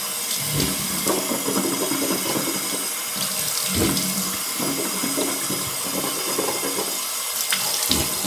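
No technical faults can be heard anywhere in the recording.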